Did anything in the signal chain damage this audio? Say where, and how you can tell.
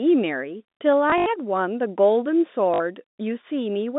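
Yes, the network stage damaged it, through packet loss with last packet repeated. From 1.1 to 1.26 s about 100 ms of audio is missing, scattered over 160 ms with the longest gap 80 ms. From 2.74 to 2.8 s another 60 ms is missing. Each gap is filled by replaying the last received packet, which fits 20 ms packets. The replays don't align with the pitch, so the runs buzz at about 50 Hz, heard as a brief robotic stutter over the G.711 telephone band of 200 Hz to 3.7 kHz.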